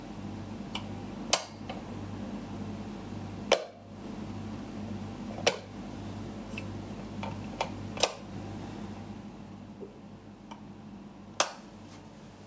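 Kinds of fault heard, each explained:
Gain pumping, throughout the clip: the gain is pulled down on loud sounds, a swing of about 10 dB. Loud and quiet moments end up closer in level and the sound feels squashed. The likely cause is input gain set far too high, with a fast limiter or compressor pulling it down on every peak. The call-style band limit, with nothing above 8 kHz, is a separate matter.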